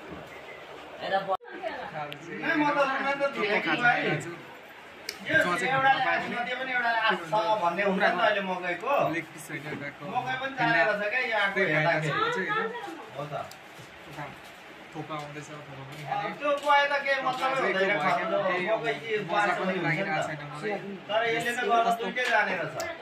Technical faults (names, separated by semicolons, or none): resampler restarted on every block